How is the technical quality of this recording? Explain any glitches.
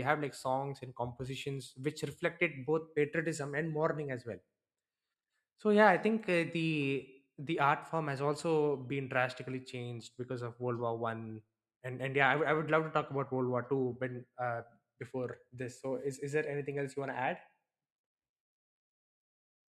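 Nothing stood out on listening: no glitches or technical problems could be heard anywhere in the recording.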